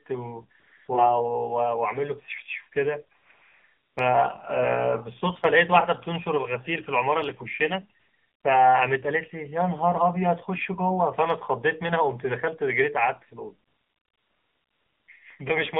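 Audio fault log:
Throughout: AMR narrowband mobile codec. The speech is squeezed into a 200 Hz to 3.6 kHz band, and its plainly buzzy, synthetic timbre fits a low mode near 7.4 kbps.
0.60–0.88 s, 3.18–3.30 s, 3.32–3.96 s, 8.00–8.44 s, 13.68–15.08 s: AMR comfort noise. Speech frames stop for 0.12 to 1.4 s, and steady synthetic noise replaces the real background, switching in and out.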